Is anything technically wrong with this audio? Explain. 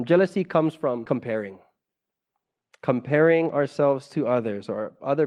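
Yes, there's a skip ahead at 1.05 s, just after "comes from". About 0.4 s of speech got dropped in transit or flushed by an overfull jitter buffer, and playback jumps straight to later audio with no gap or fill, so the join sounds abrupt.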